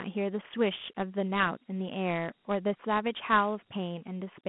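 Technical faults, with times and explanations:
Throughout, Dialogic VOX ADPCM: the speech sits in a narrow telephone band, about 150 Hz to 3.4 kHz, with nothing above 3.8 kHz, and a gritty, granular hiss rides along with every syllable and falls away in the gaps. Each sample is coded as a small 4-bit step from a prediction, so errors show up as grit that tracks the speech. Plain band-limiting would stay clean, and the density of the grain fits a 32 kbps, 8 kHz stream.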